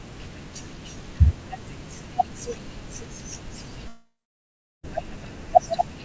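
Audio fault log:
3.88–4.85 s, long network dropout: the speech gives way to a fading buzz, then about 0.73 s of silence, and 0.96 s of audio is lost, likely from missing packets. The spectrogram shows a smeared, decaying band, then blank; the waveform tapers to flat.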